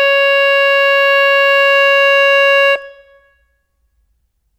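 Nothing in this music stood out as a technical problem on listening.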